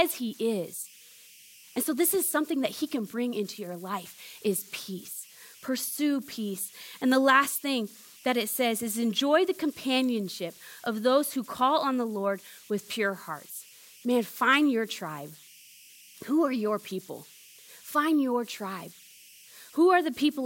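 Speech with converter idle tones running the whole way through: a whistle around 3 kHz in the pauses and a grainy hash under the quieter passages, about 26 dB below the voice. That's an undithered delta-sigma converter settling into repeating bit patterns at low levels.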